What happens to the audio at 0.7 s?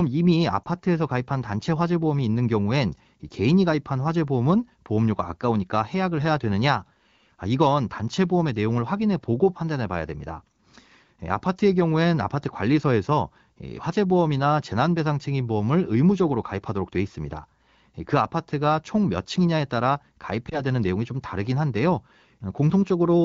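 A lost AMR speech frame occurs at about 0.66 s. A single frame failed its checksum, so the decoder filled the gap by reusing the last good pitch and vocal-tract settings at reduced gain. The result is a brief dip or warble in the speech, about 20 ms long, which fits one dropped frame. On this wideband call the speech returns right after, perhaps weak or rough for an instant.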